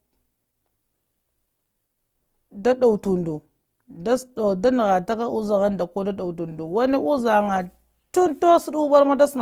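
A speech clip with plainly audible Opus compression running the whole way through. The voice has a rough, grainy, noisy texture rather than a swirly one, and the band still reaches about 20.2 kHz, which fits Opus music mode at around 24 kbps as the likely culprit.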